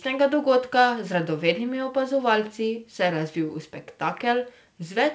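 Nothing's actually wrong with this bit of speech; it has simply come over a call link that keeps everything below 8 kHz, which fits a wideband G.722-style connection doing its job as intended.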